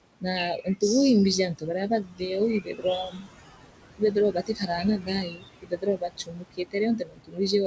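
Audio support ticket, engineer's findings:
Background noise pumping throughout, dropping away in gaps and swelling back under speech. Noise suppressor artifacts: frame-by-frame gain reduction of roughly 20 dB on bands judged stationary noise, fighting room noise sitting only about 12 dB below speech. Band cutoff at 8 kHz fits the G.722 wideband call path, likely around 64 kbps.

Speech faint or swallowed at 0.57–0.82 s (about 13 dB deep, about a tenth of a second affected) and 2.03–2.22 s (about 18 dB, about a fifth of a second). Speech cut by the noise suppressor: soft speech energy misclassified as noise, gated down with the background.

Same symptom, longer: 2.61–3.27 s (about 18 dB, about 0.4 s lost) and 3.98–7.53 s (up to about 20 dB, around a second and a half lost in total). Soft speech repeatedly suppressed as noise.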